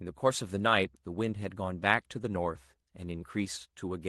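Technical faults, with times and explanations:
Nothing here stands out as a technical fault; the speech just comes across the way a normal call link carries it, with the top end stopping around 12 kHz.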